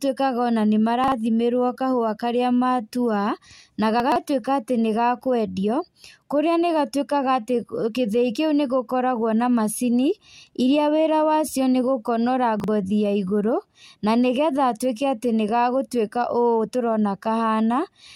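Chunks out of order occur at 1.04 to 1.12 s, 4.0 to 4.16 s, and 12.6 to 12.68 s, just after "wacio nĩgũkonora". In each, a 40 ms piece of the speech plays late, after chunks that should follow it: one chunk late at 1.04 and 12.6 s, three late at 4.0 s. Nothing is missing, but the reordering creates hard joins, and each span sounds briefly jumbled, the longest at 4.0 s.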